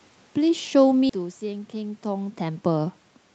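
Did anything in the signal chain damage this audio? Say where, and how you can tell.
Yes. Between 0.45 and 2.99 s the call processing's automatic gain rising is audible. The input dropped by about 12 dB, and the control answered by raising its gain about 4 dB over more than two seconds. The room noise swells along with the voice, which is how it differs from the talker moving near 1 s and 2 s. A talker changing distance alters the voice level but leaves the background floor where it was.

At 1.09 to 1.11 s there is a skip ahead in the network and jitter-buffer stage. About three quarters of a second of audio is gone, and the two sides are butted together with no silence and no concealment fill. A packet-loss dropout would leave a gap or a smeared, buzzy patch. Here playback simply jumps forward, because later audio was already waiting and the delay was cut abruptly instead of being bridged.

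From 1.19 to 1.99 s comes a jitter buffer speed-up. The speech runs at about 113% of normal pace with its pitch unchanged, and it sounds hurried. Roughly a tenth of a second was trimmed out as many short pitch-period slices to drain excess buffered delay. The steady pitch is what separates it from a resampling or clock error, since that would raise the pitch along with the tempo.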